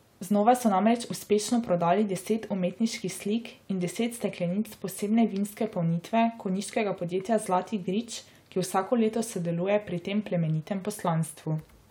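No audible technical faults occur anywhere in the recording.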